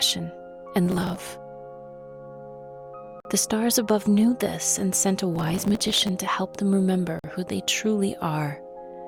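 From 0.86 to 1.19 s, and again for longer from 5.36 to 6.09 s, processor overload crackle tears through the sound. The processor fell behind and repeatedly missed deadlines for very small buffers, well under a millisecond each. It skipped the missed audio and replayed nothing, leaving dozens of tiny hard-edged holes. The result is gritty crackle that stops abruptly. A waveform shows dense notches, and a spectrogram shows a smear of broadband vertical streaks across the affected spans.

At 3.20 to 3.25 s and 7.19 to 7.24 s there is a gap between chunks, about 48 ms of silence each time. The two holes fall exactly 4 s apart, which points to audio delivered in 4-second chunks with a late start or padding at each join. The sound is interrupted but not lost, and each hole is heard as a brief clean dropout. The waveform shows a flat near-silent segment with sharp edges, and the spectrogram shows a blank vertical band.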